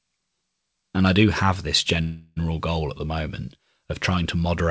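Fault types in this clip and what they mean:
call audio freeze: Right after "I do have this", at 2.02 s, the last sound is held as a fading buzz or hiss for about 0.34 s, then "goal at" continues intact but later. Delayed packets likely emptied the jitter buffer, and the receiver filled the wait.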